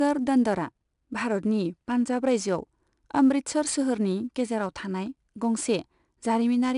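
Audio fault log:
throughout: 4-bit ADPCM compression. Coarse adaptive steps leave a plainly audible gritty hiss tracking loud speech; the spectrogram shows a broadband noise haze and nothing above 10.6 kHz.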